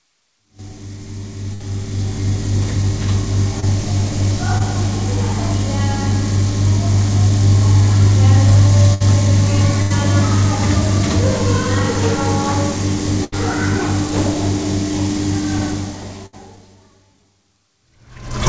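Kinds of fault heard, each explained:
Burst of packet loss: A run of packets didn't arrive in time, so the receiver kept extending the last bit of sound and let it fade while it waited. You hear a short held, dying-away patch, then the audio picks up a little further along with the real material skipped. It happens five times, at 1.54, 8.94, 9.82, 13.24 and 16.26 s, each covering roughly 60 to 80 ms. The later ones at 9.82 and 13.24 s run longest.
Short concealed packet loss: A much smaller hole, around 20 ms, where the decoder got nothing and papered over the gap by continuing the previous sound before blending back into the real signal. Here it's just a brief smear or wobble rather than an obvious dropout. It turns up twice, at 3.60 s and 4.58 s, and sits on top of the call codec's band limit, with nothing above 8 kHz.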